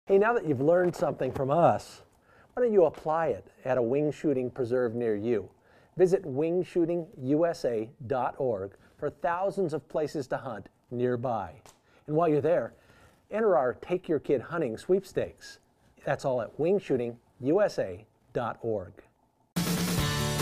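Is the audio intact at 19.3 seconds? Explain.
Yes, at 19.3 seconds the audio plays through cleanly, with no dropout, click, distortion or other fault at that point.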